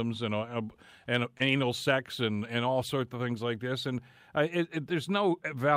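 Speech, with one short concealed packet loss from 1.37 to 1.42 s: 20 ms of audio never reached the decoder in time, so the receiver extended the preceding sound to cover the gap before blending back. The result is a brief smear between "and uh and" and "sex and and all".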